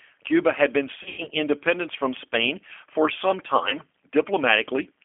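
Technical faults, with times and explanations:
Throughout: G.729 codec. The speech is band-limited to a telephone line of roughly 300 Hz to 3.4 kHz, with nothing above 4 kHz, and the coding damage is plainly audible. At 8 kbit/s the decoder rebuilds each 10 ms frame from a vocal tract filter, a pitch predictor and a handful of fixed pulses, so the voice comes out intelligible but rough and slightly synthetic, lacking the fine detail a waveform codec would keep.
1.03 to 1.29 s: VoIP packet loss concealed by the speech codec. Just after "had been", about 150 ms of audio goes missing, scattered over roughly 240 ms, with the longest gap 90 ms, which fits five lost packets. The decoder fills each gap by extending its last pitch and filter at falling gain, so the sound smears into a stretched, fading sound. Since every frame is predicted from the one before, the voice stays weakened until "independence from".
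3.69 to 3.77 s: VoIP packet loss concealed by the speech codec. After "for some", a single lost packet of about 30 ms is bridged in the same way, giving a brief stretched sound and a dip in level. The decoder state then needs a few frames to recover, which lengthens the disturbance to about 80 ms.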